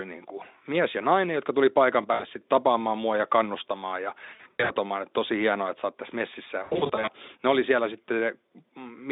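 Finnish speech over a narrowband Speex line, with three stretches where the sound smears into a fading buzz or coloured noise: 2.13 to 2.24 s after "nainen jotka tuli paikan", 4.25 to 4.71 s after "mua ja kannustamaan ja", and 6.63 to 7.10 s after "oot tässä messissä ja". This is VoIP packet loss concealed by the speech codec, where the decoder extrapolates missing packets and lowers the gain.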